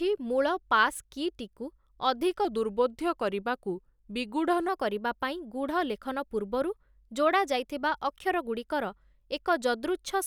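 From 2.45 s to 4.68 s the speech shows a wrong sample rate fault. It runs at 0.919 times normal speed and about 1.5 semitones low, so it sounds slightly slow and deep, which fits 48 kHz material played back at 44.1 kHz without conversion.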